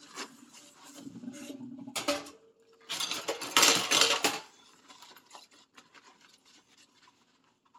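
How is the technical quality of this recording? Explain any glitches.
Nothing here sounds broken: the audio runs without any dropouts, clicks or other glitches to explain.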